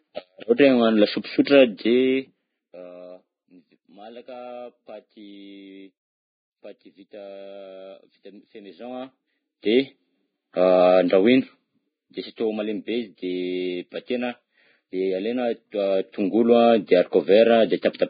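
Across the whole clip the speech sounds hissy and grainy, with roughened tones, blurred attacks and nothing above 4.9 kHz. The heavy damage likely comes from Vorbis compression at a low setting, which fits a bitrate around 15 kbps: the cut-off drops and the treble is quantised so coarsely that its detail turns to noise.

Pre-echo appears from 0.56 to 0.59 s, from 1.45 to 1.47 s and at 12.36 s. Each time a brief hiss of about 20 ms runs ahead of a sharp attack, which sounds softened. The codec spreads its quantisation noise across a whole block, so noise meant for the loud onset also fills the quiet moment before it.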